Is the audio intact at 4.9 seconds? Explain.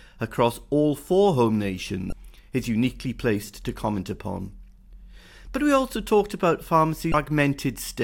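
Yes, at 4.9 seconds the audio is intact, with no dropout, click, distortion or other fault in the speech at that moment.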